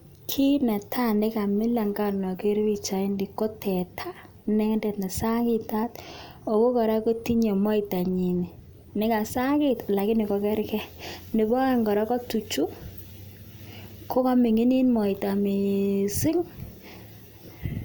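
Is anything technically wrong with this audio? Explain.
No, nothing is technically wrong with this audio.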